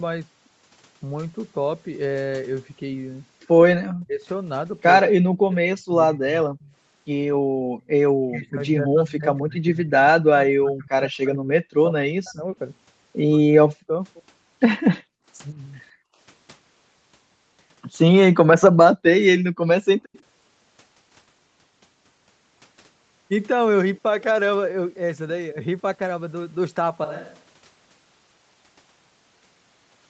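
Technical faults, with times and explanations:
3.82–6.61 s and 8.14–15.57 s, speech suppressed in double talk: the voice dips by roughly 40 dB in pieces, about 1.5 s and 4 s in total, most likely because the echo canceller ducked it while the far side talked. The waveform shows chopped, shrunken segments, and the spectrogram shows speech harmonics fading in patches.
6.63–6.73 s, 9.09–9.15 s and 20.13–20.20 s, echo leak: brief faint copies of the voice arrive 155 ms late, about 35 dB, 25 dB and 35 dB below the speech. This is likely residual loudspeaker echo the canceller missed, and it shows as weak, smeared repeats of the preceding spectral pattern.
7.26–7.86 s, 15.03–16.19 s and 19.45–20.13 s, background gated by the echo canceller: the room noise drops out, by about 36 dB at 7.26 s and about 40 dB at the others. The noise floor collapses to near-silence in the waveform and leaves dark gaps on the spectrogram.
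27.04 s to the end, switch to a distant microphone: the sound abruptly turns hollow and roomy, about 10 dB quieter, with room noise only about 25 dB below the speech. It is likely a fallback to a farther microphone, and it shows as a sudden level step with a raised, denser noise floor.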